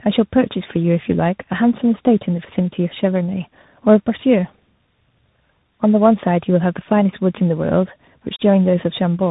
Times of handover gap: none

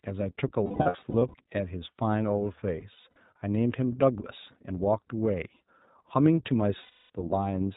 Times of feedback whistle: none

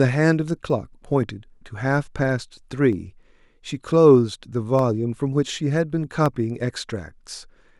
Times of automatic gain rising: none

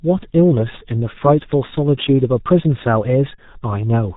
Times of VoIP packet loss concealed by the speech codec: 3.36-3.39

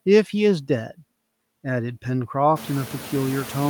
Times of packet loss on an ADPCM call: none

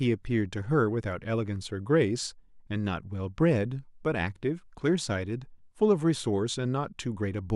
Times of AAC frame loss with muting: none

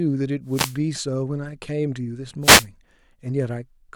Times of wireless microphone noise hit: 0.46-0.79, 2.41-2.67

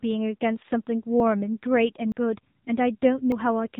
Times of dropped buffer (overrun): 1.20, 2.12, 3.32

